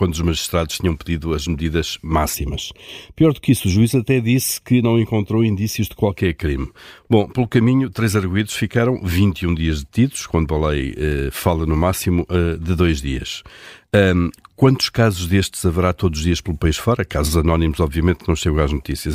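A speech recording, and from about 2.35 s to 6.16 s it goes hollow and phasey, the classic sign of channel delay (comb filtering). One side is landing a fraction of a millisecond, roughly a third, behind the other, and once they're folded to mono the shared content cancels at evenly spaced frequencies. The first notch sits around 1.5 kHz, right in the middle of the speech range, which is why that stretch sounds hollow.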